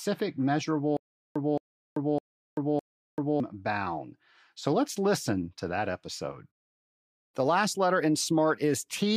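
From 0.97 s to 3.4 s, playback likely stalled and kept retrying, replaying its last fragment each time before running dry. The result is stutter with silent gaps: a 220 ms burst of speech repeats four times, every 608 ms, with 387 ms of silence between, and the intervening speech is lost.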